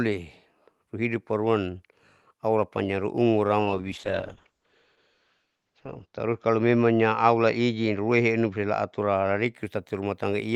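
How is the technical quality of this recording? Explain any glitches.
The speech carries one clear glitch, a call bitrate drop from 3.61 s to 9.59 s, heard over an Opus call path. The call's bandwidth estimate fell and the encoder was pushed to code far more coarsely. The audio band narrows from about 12 kHz to 8 kHz, and the sound goes rough and muffled, worst for roughly 2.45 s. The degradation fits a fall from around 32 kbps to about 8 kbps.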